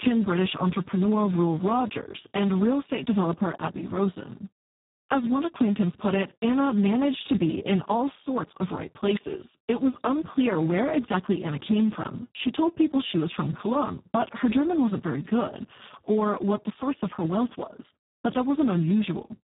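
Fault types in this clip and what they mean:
Speex codec: a CELP speech coder starved of excitation bits, so the speech throughout sounds hoarse, buzzy and nearly robotic, which fits a setting around 4 kbps. On a spectrogram, nothing appears above 3.8 kHz, and the harmonics below look smeared and blurred.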